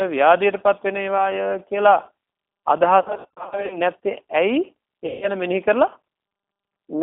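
The whole clip runs through a G.729 codec at 8 kbit/s. The line passes only about 250 Hz to 3.5 kHz. Speech is rebuilt from a filter, a pitch predictor and a few pulses per frame. The damage is plainly audible: the speech sounds rough and synthetic.

VoIP packet loss concealed by the speech codec follows. At 1.18 s a brief 10 ms gap is filled in by the decoder. From 3.00 to 3.77 s, about 400 ms of audio goes missing in short runs over 700 ms. The decoder stretches its last sound into buzzy or noisy fading fragments. From 5.06 to 5.32 s, a 160 ms loss becomes one sustained buzzy or noisy stretch that dies away.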